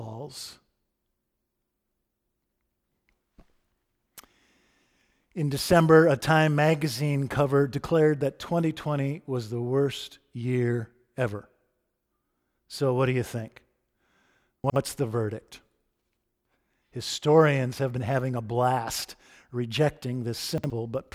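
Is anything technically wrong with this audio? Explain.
Yes. Chunks out of order at 14.64 to 14.76 s and again at 20.58 to 20.7 s: each time a 60 ms chunk of speech arrives one chunk late and plays after its successor. Nothing is lost, but the swapped pair leaves three hard joins, heard as a brief jumbled stutter.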